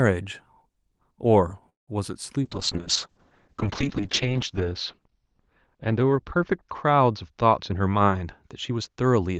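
Speech carried over an Opus call path shows three separate faults. From 1.69 to 1.89 s there is a call audio freeze. The sound stops and is held as a short fading tail, then drops to near silence for about 170 ms before resuming where it left off. Nothing audible is lost, but roughly 180 ms of extra delay is inserted. The likely cause is packets stalling in transit until the jitter buffer ran dry, with the receiver extending the last audio to cover the wait. From 2.45 s to the end a call bitrate drop sets in. The speech loses its upper range as the audible bandwidth shrinks from about 12 kHz to about 6 kHz, and it takes on a coarse, watery texture, worst for about 1.7 s at the bottom of the dip. That combination fits the encoder being pushed from around 40 kbps down to about 6 kbps after the bandwidth estimate fell, so it codes more crudely and discards the high band. Between 7.61 and 9.06 s a jitter buffer speed-up makes the speech run about 11% fast at unchanged pitch, so it sounds hurried. 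The receiver is trimming short pitch-period slices in succession, around 150 ms in total, to drain excess buffered audio and bring the delay back down.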